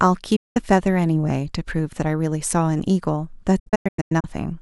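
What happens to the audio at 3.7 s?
A digital broadcast dropout runs from 3.59 to 4.25 s. The receiver mutes failed frames with 8 ms fades, leaving short silent holes, the longest 96 ms.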